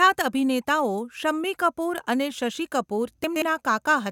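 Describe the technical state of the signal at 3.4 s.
At 3.4 s the speech sounds briefly jumbled, with a short scrambled moment, just after "અને શશિ કપૂર". This is chunks out of order, spanning 3.24 to 3.42 s: one 60 ms chunk of audio arrived or was written two chunks late, so it plays after the two that should follow it. Nothing is missing, but the reordering creates three hard joins.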